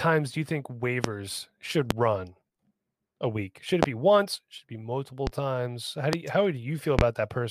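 Loud pops at 1.04, 1.91, 3.83, 5.27, 6.13 and 6.99 s, each a sharp thump over the continuing speech and likely caused by a voltage glitch, show as tall spikes about 25 dB above the signal (about 15 dB at 5.27 s) on the waveform and as thin full-band vertical lines on a spectrogram.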